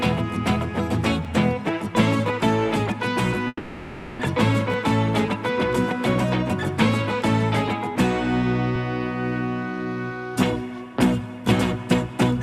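At 1.25 s there is a repeated buffer: the playback device ran short of fresh audio and played its last block once more. The repeated piece is about 10.7 ms long, which fits a 512-sample buffer, and it sounds twice with a hard join between the copies. With a block this small the result is a brief click or buzz rather than a clear stutter. Effectively no audio is lost; the sound simply resumes after the extra play.

From 3.47 s to 4.22 s the audio behaves like a long network dropout, the likely cause being a stretch where no packets reached the receiver. About 720 ms of the original sound is missing. The receiver papers over that span by continuing the last sound as a buzz or hiss that decays over roughly 720 ms, followed by about 30 ms of silence. The audio then picks up again further along, with the missing portion never played.

At 4.74 s a second repeated buffer occurs, matching the first. 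Another block of about 10.7 ms, again consistent with a 512-sample buffer, is played one extra time because new audio did not arrive in time. The hard join at the repeat produces a short click or buzz, and effectively no audio is lost.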